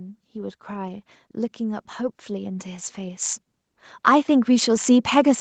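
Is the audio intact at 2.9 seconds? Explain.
No. At 2.9 seconds the automatic gain control is still ramping up, having judged the input too quiet. From 0.32 to 3.29 s it raises gain by about 9 dB, so the speech and the background noise swell together in a slow rise.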